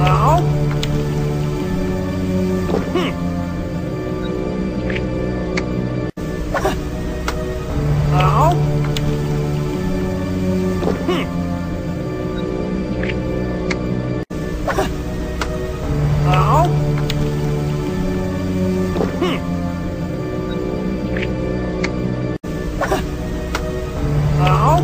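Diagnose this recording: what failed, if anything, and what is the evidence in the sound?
Nothing in the recording stood out on listening as a failure at any stage of the chain.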